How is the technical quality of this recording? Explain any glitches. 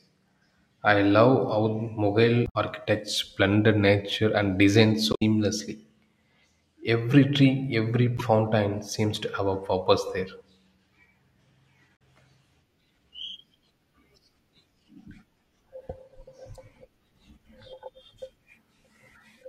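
The technical quality suffers from damaged data in a compressed stream, causing five brief glitches in the speech: 2.44–2.56 s, 5.11–5.22 s, 8.17–8.21 s, 11.93–12.00 s, and 16.55 s. Corrupted bytes make the decoder misread frames and lose sync, so each spot comes out as a short chirp, squawk, click or hole breaking the speech.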